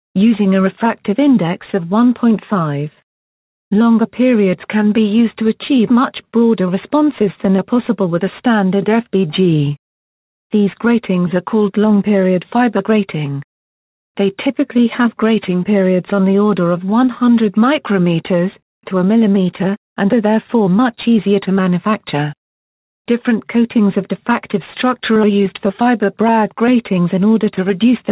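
The sender's clock runs slow relative to the receiver, by roughly 2 percent, so this audio shows clock drift between sender and receiver throughout: the receiver's jitter buffer keeps draining, and playback carries a faint, recurring unevenness as it struggles to stay fed. To compensate, the receiver makes repeated timing corrections from 1.01 s to 27.74 s, repeating short slices so the stream plays at 99 percent speed and gains around 400 ms overall. These edits are unevenly spaced and each is small. Packets also arrive late or go missing in two stretches, producing scattered short gaps: about seven between 5.01 s and 10.20 s, the longest near 20 ms, and about seven more between 17.19 s and 24.26 s, the longest near 30 ms. Each hole is bridged by extending the preceding sound, leaving brief ticks or smears. The call path uses G.711 mu-law at 64 kbps, which limits the audio to below 4 kHz.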